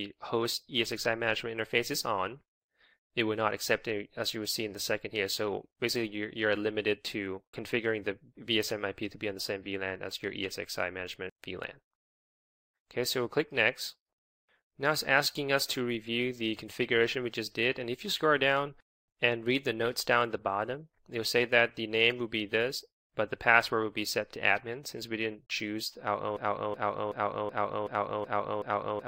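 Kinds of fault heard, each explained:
Broken-record loop: from 26.37 s to the end, one fragment of about 0.38 s repeats exactly, back to back, seven times, and the audio that should have followed is lost. This is most likely a stalled player or stream resending its last buffer. Unlike an echo, nothing decays or overlaps.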